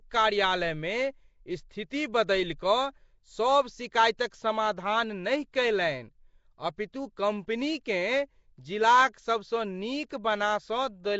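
This speech clip carries plainly audible codec damage from start to end. The sound has a rough, hissy halo and a smeared, underwater quality. Nothing reaches above 7.7 kHz. The likely cause is Nellymoser compression, which fits Nellymoser Asao at 32 kbps.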